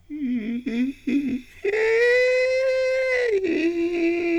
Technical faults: hard clipping

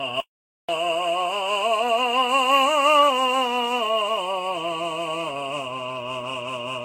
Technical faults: generation loss; audio dropout to silence

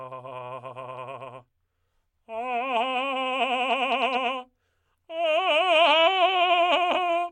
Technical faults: none

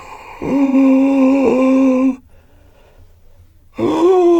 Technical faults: AAC frame loss with concealment

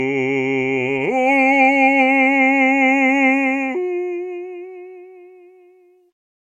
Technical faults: truncation distortion on a fade

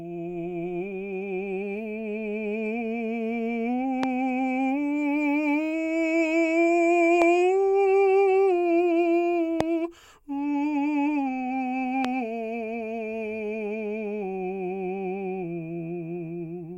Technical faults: loud pop

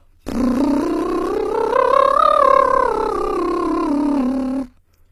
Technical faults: HE-AAC compression

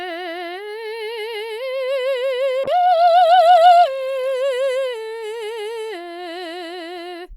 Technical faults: call bitrate drop

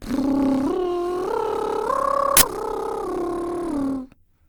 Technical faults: generation loss; uninitialised buffer

